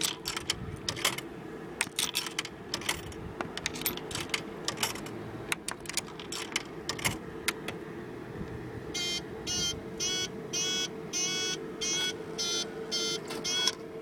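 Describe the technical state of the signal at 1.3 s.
At 1.3 s the audio is intact, with no dropout, clipping, glitch or other fault in the signal.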